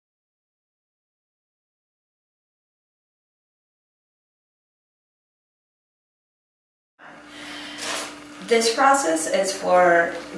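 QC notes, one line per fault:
No faults heard on this clip; nothing to log.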